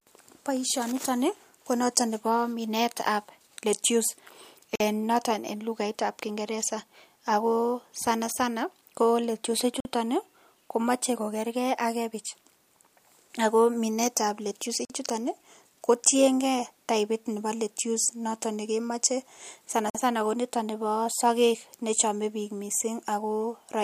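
Speech delivered in 5-second chunks has a gap between chunks at each join, where about 48 ms of silence is inserted before the next chunk starts. Nothing is lost, but hard-edged holes interrupt the speech at 4.76, 9.80, 14.85 and 19.90 s.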